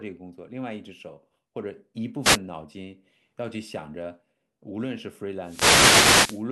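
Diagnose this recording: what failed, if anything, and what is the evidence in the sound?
The wireless mic's radio link failed: wireless microphone noise hits, short static swishes at 2.22–2.39 s and 5.41–6.46 s, as multipath fades let receiver noise rise.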